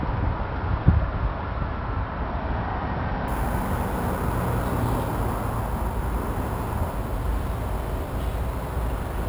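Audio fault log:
3.28–9.29 s, imaging from sample-and-hold upsampling: the audio was raised from 12 kHz to 44.1 kHz by repeating each sample with no smoothing filter, so mirrored copies of the spectrum appear around multiples of 12 kHz. The lowest copy, between 6 and 12 kHz and about 24 dB below the signal, adds a bright metallic fizz that follows the sound's level. On a spectrogram, reflected bands appear above 6 kHz, and the waveform shows stair-stepped edges.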